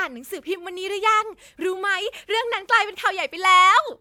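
No technical faults can be heard anywhere in the recording, with the signal holding steady from its opening moment to its close.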